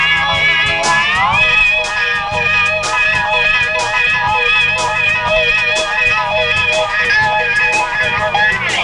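Nothing goes wrong anywhere in this one. There's no dropout, glitch or distortion to flag at any point.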